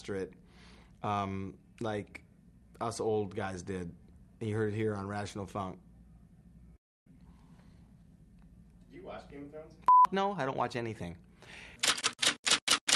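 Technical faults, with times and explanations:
6.76–7.08 s, long network dropout: The sound breaks off, and the last moment is carried on as a fading buzz or hiss that gives way to silence or a low steady noise. When the audio returns it has jumped ahead, with about 200 ms missing. This is likely a network dropout: packets stopped arriving, and the receiver concealed the gap by extending what it last had before it ran out of material to stretch.
7.15–8.04 s, jitter buffer speed-up: Right after the gap the audio runs at about 110% speed with its pitch unchanged, so it sounds hurried. Delayed packets arrived together, leaving the jitter buffer holding roughly 100 ms more than it aims for. To cut that extra delay, the receiver repeatedly removed short pieces one or a few pitch periods long until the excess was gone, and this compresses the timing without shifting the pitch.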